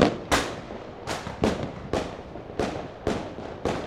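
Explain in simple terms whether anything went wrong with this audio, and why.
Nothing went wrong here: the sound comes through intact, with no dropouts, glitches or distortion anywhere in the clip.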